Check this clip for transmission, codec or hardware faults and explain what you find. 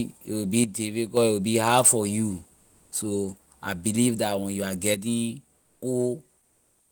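Two kinds of fault turn up, each twice: a stereo channel dropping out, and comfort noise standing in for the real background.

One channel drops out from 0.64 to 1.17 s, right after "it will be," and again from 4.94 s to the end, after "that when you are." The level falls abruptly by about 6 dB, which is what a mono fold-down sounds like when one side likely goes silent.

Comfort noise replaces the background for 360 ms, from 2.55 to 2.91 s, between "be hard for you" and "so I believe that," and for 240 ms from 5.57 to 5.81 s, about 3 dB quieter there. The real room tone turns into a smoother noise of a different tone. That's likely Opus DTX filling the pauses with synthetic noise.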